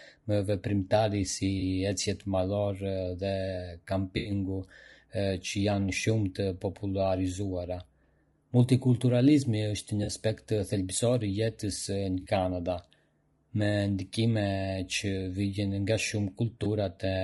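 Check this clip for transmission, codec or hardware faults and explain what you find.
Two faults are audible in this speech: a codec coloration throughout and five brief dropouts patched over by the decoder.

Low-delay AAC compression runs through the whole clip and is plainly audible. Its most likely cause is AAC-ELD coding. The short frames resolve the voice's harmonics coarsely, and the bitrate is about 32 kbps. Speech sounds rough and grainy, with noise filling the gaps between harmonics and a thin, synthetic-sounding top band.

AAC frame loss with concealment occurs at 1.59–1.62 s (20 ms), 4.17–4.31 s (80 ms), 10.03–10.09 s (40 ms), 12.21–12.27 s (40 ms) and 16.63–16.67 s (20 ms). Each time, the decoder rebuilds the missing audio from the last good spectrum. The short gaps sound like a smeared, noisy blip. The 80 ms gap at 4.17 s is a longer phasey, blurred patch.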